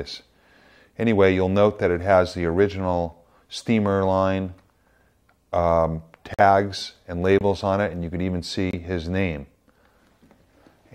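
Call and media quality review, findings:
Corrupt frame muted. Decoder rejected bit-damaged compressed frames; player substituted silence, timing preserved. Abrupt dropouts at 6.34 s (62 ms, fits two frame lengths), 7.39 s (36 ms) and 8.71 s (36 ms), the latter two each consistent with one rejected frame of about 36 ms. Sound cuts out instantly and resumes on schedule, no time shift. Probable component: transport or storage upstream of decoder, with errors passing into the payload undetected.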